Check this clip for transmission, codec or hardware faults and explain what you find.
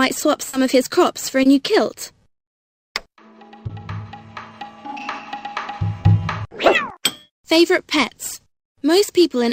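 Four brief dropouts were covered over by the receiver. Short concealed packet loss occurs at 0.49–0.55 s (40 ms filled), 1.43–1.47, 3.67–3.71 and 6.01–6.05 s (20 ms each). Audio arrived too late, so the decoder extended the preceding sound before blending back, leaving a short smear or wobble at each point.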